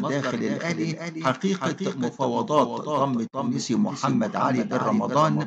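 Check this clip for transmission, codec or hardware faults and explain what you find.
A doubled audio track runs through the whole clip. A second full-band copy of the sound trails the original by a bit under half a second. It sits only a few decibels below the original. It has no decay and no added room colour. The likely cause is the same signal arriving twice, through a second, slower capture path or an edit holding two copies out of step. The result sounds like a flat, hard echo.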